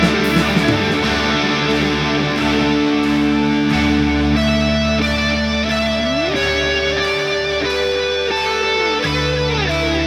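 No technical faults can be heard anywhere.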